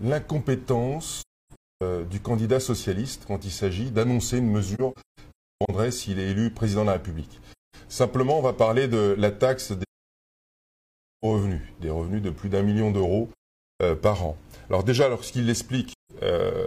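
AAC frame loss with muting cuts holes at 1.18 to 1.82 s, 4.75 to 5.70 s, 7.52 to 7.75 s, 9.82 to 11.25 s, 13.32 to 13.80 s and 15.92 to 16.11 s. Lost frames decode as silence, and the overlapping transform windows fade the sound smoothly out and back in.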